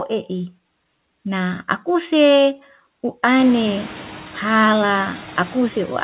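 From start to finish, noise suppressor artifacts are present. The suppressor judges which frequency bands hold steady noise and pulls them down, here by about 10 dB, frame by frame, so the background sinks in the gaps and swells back under the speech. After the room noise rises by about 23 dB at around 3.5 s, the suppressor has much stronger noise to work against. On a spectrogram the noise floor shows as flickering, patchy blocks below the call path's 4 kHz ceiling.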